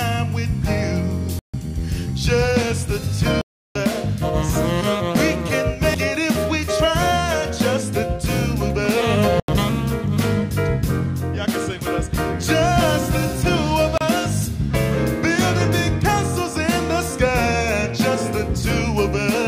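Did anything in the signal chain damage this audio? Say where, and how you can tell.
Yes. Blocks of digital silence appear at 1.39 to 1.54 s, 3.41 to 3.76 s, 9.40 to 9.48 s and 13.98 to 14.01 s. These are driver or buffer faults. The signal drops to silence and returns with no fade. The holes last 146, 341, 85 and 31 ms. The 341 ms and 85 ms gaps fit 16384- and 4096-sample blocks at 48 kHz, each likely left unfilled when the output deadline passed.

A CD skip at 5.94 s points to the playback stage. It is heard as a tick with a very brief mute of only a few milliseconds, after which the audio resumes from a different point. Here a physical knock or a disc flaw threw the laser onto another turn of the spiral, so the player muted for a moment and picked up the track out of sequence.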